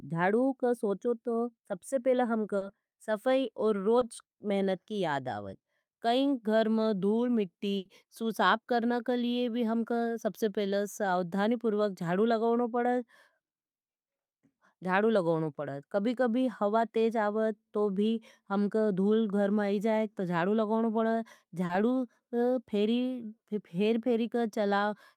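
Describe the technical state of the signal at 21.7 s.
Short concealed packet loss, 21.65–21.71 s, after "तो जाड़ू लगवनो पड़ज": 40 ms rebuilt from preceding sound, heard as a smear, not a dropout's silent gap.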